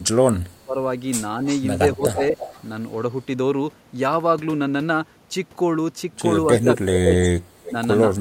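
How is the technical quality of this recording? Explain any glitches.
The recording has two recurring call-processing faults that interrupt the speech in three places.

Speech suppressed in double talk, at 0.37 to 0.76 s, 1.95 to 2.35 s, and 6.45 s to the end: the speech dips sharply, by as much as about 25 dB. This is likely an echo canceller ducking the talker while both sides spoke.

Echo leak, at 1.45 to 1.61 s, 2.18 to 2.64 s, and 6.63 to 7.71 s: a copy of the speech returns 318 ms late, about 10 to 15 dB down. This is likely loudspeaker pickup that the canceller missed.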